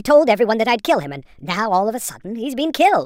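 A wrong sample rate runs throughout the speech: the samples play back faster than they were captured, with no conversion, so speed and pitch rise together. The pace runs 1.38 times too fast and the pitch sits 5.55 semitones high, which fits 32 kHz audio played at 44.1 kHz.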